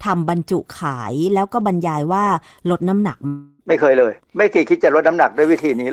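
A long network dropout runs from 3.27 to 3.62 s. The sound stalls into a synthetic buzz that stretches the last moment and fades without reaching silence, then resumes with about 0.32 s skipped, likely because packets stopped arriving and the receiver improvised the gap.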